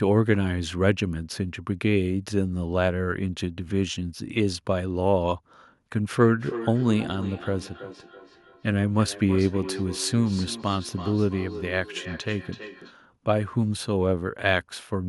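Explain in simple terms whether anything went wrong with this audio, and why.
Feedback echo between two devices, from 6.23 to 12.97 seconds: the speech returns about a third of a second later. Two devices on the same call are in one room, so one's microphone picks up the other's loudspeaker, and neither echo canceller removes sound from the other device.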